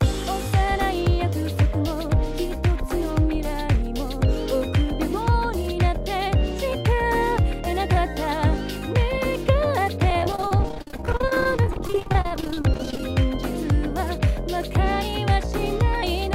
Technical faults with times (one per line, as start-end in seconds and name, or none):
10.10-13.00 repeated packet loss (robotic sound)